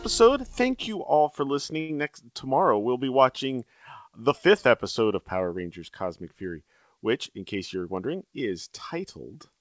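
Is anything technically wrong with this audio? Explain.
Yes, there are two faults. From 1.80 to 1.91 s, just after "you all for", a sound is held too long with a slight buzzy flatness before the speech picks up again. This is a short stall from a late packet. The jitter buffer ran dry, so the receiver stretched the last sound for 88 ms until the packet arrived, then continued where it left off. Nothing is skipped, but playback now runs about 88 ms further behind.

From 7.55 to 8.41 s, after "which in", the speech sounds hurried, running at 110% speed while keeping its normal pitch. This is a jitter buffer speed-up. Too much audio had built up in the buffer, so the receiver repeatedly cut out short slices of one or a few pitch periods to bring the delay back down, removing roughly a tenth of a second in total. The audio passed through a G.722 call path, which leaves nothing above 8 kHz.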